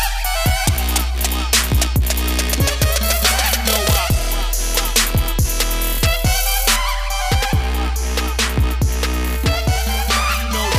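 From the start to 6.76 s the audio has pre-emphasis left on. A treble boost was applied for recording or transmission and the complementary de-emphasis cut was never made, so the high end stays lifted by about 8 dB at 10 kHz relative to 1 kHz, a shelf shape that fits the CD 50/15 µs curve. The result is a thin, overly bright sound with exaggerated sibilance.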